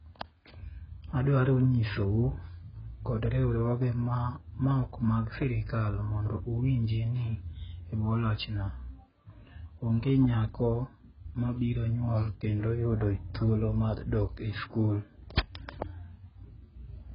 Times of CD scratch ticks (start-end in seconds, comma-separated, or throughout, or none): none